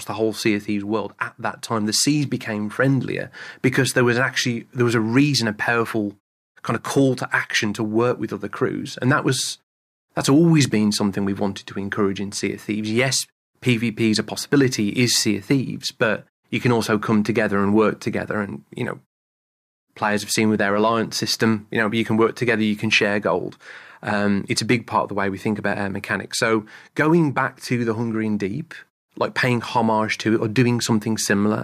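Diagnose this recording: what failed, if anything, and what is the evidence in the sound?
Nothing has failed in this recording; no stage in the chain shows a fault. The background fades to silence during the longer pauses and comes back in time for each new phrase, so only very quiet sound is lost.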